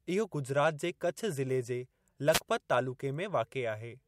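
A short burst of static swishes across the speech from 2.31 to 2.40 s, a wireless microphone noise hit where the FM radio signal briefly faded and receiver noise rose.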